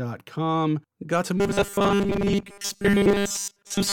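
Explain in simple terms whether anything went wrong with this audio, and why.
From 1.37 s to the end, the speech turns into a rigid, metallic buzz at 200 Hz: robotic sound from repeated short buffers. It's likely caused by the same 5 ms chunk replaying while most of the real audio is skipped, not by the silent gaps of a dropout.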